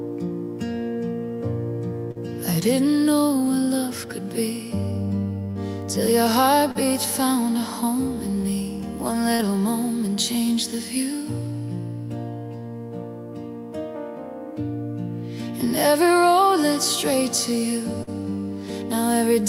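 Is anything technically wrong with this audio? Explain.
Yes, there's short concealed packet loss five times: 2.11–2.18, 5.51–5.58, 6.71–6.78, 9.35–9.42 and 18.03–18.10 s. Each time about 40 ms never arrived, so the receiver extended the preceding sound to bridge the gap before blending back, leaving a brief smear or wobble.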